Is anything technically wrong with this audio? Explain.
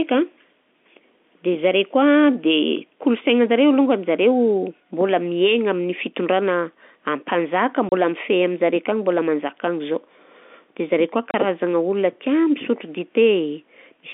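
Yes: there is packet loss filled with silence at 7.89–7.92 s and 11.31–11.34 s. The receiver inserted silence where a packet never arrived, leaving 30 ms holes, each consistent with one lost packet, with abrupt edges in the telephone-band speech.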